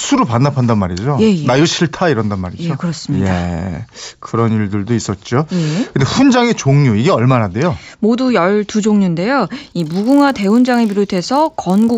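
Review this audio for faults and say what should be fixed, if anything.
From 9.56 s to the end, the speech carries a 50 Hz buzz: the resampler restarted on every block, so each 20 ms block edge converting 16 kHz to 48 kHz gets an error. Keep one continuous resampler instance, carrying its filter history across blocks.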